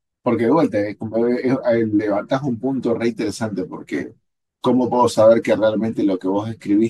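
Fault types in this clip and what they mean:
Nothing stood out on listening to this speech recording, and no audible fault was heard at any point.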